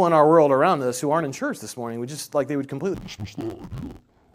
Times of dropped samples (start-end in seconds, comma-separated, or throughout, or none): none